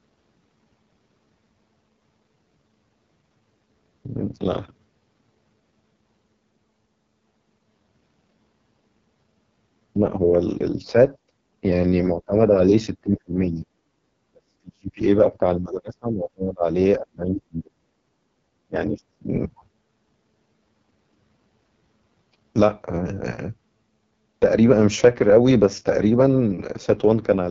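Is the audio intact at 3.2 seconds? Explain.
No. At 3.2 seconds, as across the whole clip, the speech carries heavy AMR wideband (HD Voice) codec damage. The codec models the voice below 6.4 kHz with pulse-driven synthesis and pads the top band with shaped noise. Here it sounds rough and raspy, which fits the lowest 6.6 kbit/s mode. Nothing reaches above 7.5 kHz. That ceiling rules out narrowband telephone coding, which would cut off near 3.4 kHz.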